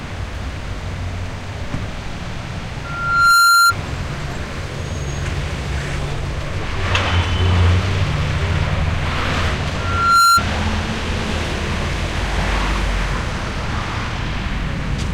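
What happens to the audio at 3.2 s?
At 3.2 s you're in the middle of a loudspeaker feedback squeal, 2.84 to 3.74 s: a mic catches its own speaker and a 1.4 kHz tone swells over half a second, ending well above the sound.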